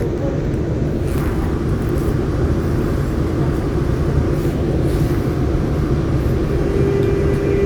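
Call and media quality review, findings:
Chunks out of order at 1.14–1.2 s and 2.68–2.76 s. Brief jumbled moments with hard joins. Pattern fits 20 ms blocks played two, then three, positions late. Probable component: jitter buffer or playout queue reordering.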